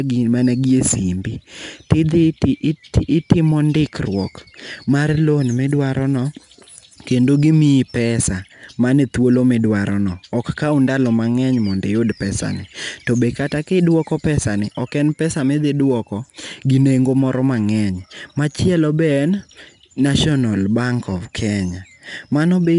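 Speech recorded through 4-bit ADPCM compression carries a gritty hiss that rides on every loud syllable for the whole clip and drops away in pauses, because each sample is coded as a coarse 4-bit step from a prediction, so the error tracks the signal level. Sharp onsets sound roughened where the step size lags. On a spectrogram the noise appears as a broadband haze under voiced passages, with an empty band above 10.6 kHz, which fits a rate near 89 kbps.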